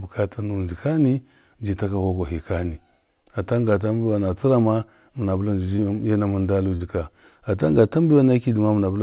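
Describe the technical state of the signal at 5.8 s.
At 5.8 s a short concealed packet loss is under way: from 5.76 to 5.80 s, about 20 ms of the call arrived too late for the decoder, and the receiver covered the gap by extending the preceding sound for roughly 21 ms before crossfading back into the real signal. The result is a brief smear or wobble where the original detail is replaced by a guessed continuation, heard through the narrowband call path with nothing above 4 kHz.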